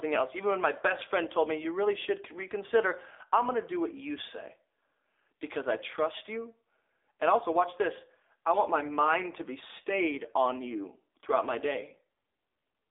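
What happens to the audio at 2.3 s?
At 2.3 s you're hearing the AMR narrowband mobile codec, and it runs through the whole clip. The speech is squeezed into a phone band, roughly 300 Hz to 3.6 kHz, with nothing above 3.7 kHz, so it sounds thin and muffled. The codec rebuilds the voice from a vocal-tract model driven by a few pulses per frame, and at this rate the result is plainly buzzy and synthetic, which fits a low mode around 7.4 kbps.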